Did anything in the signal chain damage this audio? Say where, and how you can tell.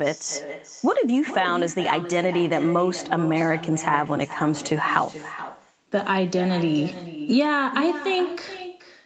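Yes. Throughout the clip there is echo with no canceller: each phrase returns as a distinct, thinner copy about 12 dB down, roughly 0.4 s later, having looped from the far end's loudspeaker into its microphone and back across the call. Room reverb would blur into a smooth tail, not repeat as a discrete copy.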